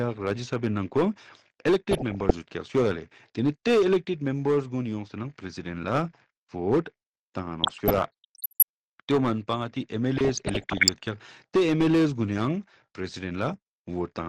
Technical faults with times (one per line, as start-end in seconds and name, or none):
0.00-14.28 hard clipping
0.00-14.28 MP2 compression
1.91-2.31 DAB burbling
7.63-8.63 DAB burbling
10.17-10.92 DAB burbling